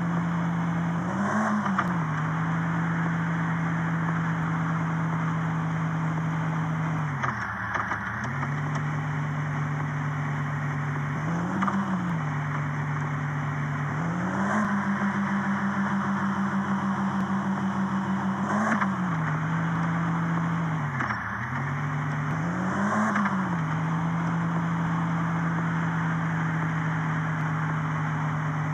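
From 1.88 s to 27.41 s a click or pop recurs every 2.55 s, about ten times in all. These are clock drift buffer slips. The likely cause is two devices running on separate clocks that disagree by roughly 300 ppm, so the buffer between them creeps until a few tens of samples are dropped or repeated. Unlike random dropouts or network glitches, these clicks keep a strict, even rhythm throughout.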